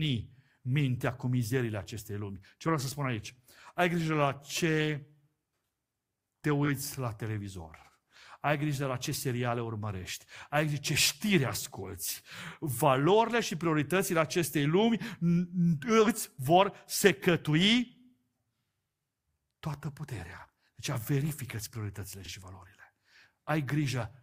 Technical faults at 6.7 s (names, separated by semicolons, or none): repeated frames